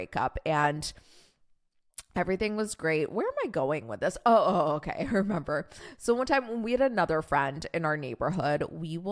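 No technical faults can be heard anywhere in this speech recording.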